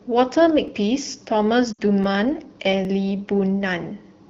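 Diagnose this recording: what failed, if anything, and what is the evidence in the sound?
Three skips at 0.68 s, 2.04 s and 2.85 s point to the driver or buffer stage, each most likely a dropped buffer (overrun). The speech jumps forward at each skip with no gap and no fade, because the missing piece, about 10 ms at the first two and about 20 ms at the third, was overwritten before it was read. The two sides are butted together. That abrupt splice with an instant jump separates it from frame loss.

From 1.72 to 1.80 s the speech drops to near silence for about 60 ms, which fits three consecutive 20 ms frames. This is lost AMR speech frames, a network or radio fault. The AMR-WB decoder kept replaying the last good pitch and vocal tract settings while lowering the gain, so the sound fades out rather than clicking. The speech then comes back weak or rough for a moment. The 12.65 kbit/s wideband coding shows only light codec damage around these events.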